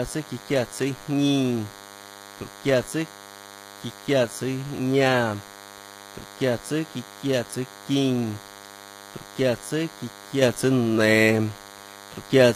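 From start to finish the speech carries a DECT cordless phone buzz, about 20 dB below the voice. A nearby DECT handset or base station transmits a short radio burst every 10 ms, and the audio circuitry rectifies it into sound. The result is a steady, thin buzz at 100 Hz, dense with harmonics. That separates it from mains hum, which sits at 50 or 60 Hz and sounds rounder, with fewer upper harmonics.

Running through the whole clip alongside the buzz, the treble sounds rebuilt rather than captured. The top end extends to 15.5 kHz and stops there, but its detail does not follow the voice underneath. Harmonics fail to line up across the crossover, and s sounds come out gritty, metallic or lispy. The damage is plainly audible and likely comes from HE-AAC compression at a low bitrate, around 24 kbps. This codec keeps only the lower spectrum and copies those bands upward under a coarse envelope. 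That distinguishes it from a plain low-pass codec, which would simply leave the top dull and empty.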